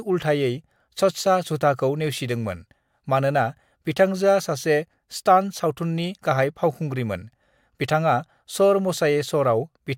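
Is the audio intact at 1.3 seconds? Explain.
Yes, at 1.3 seconds the speech plays through intact, with no fault heard at that moment.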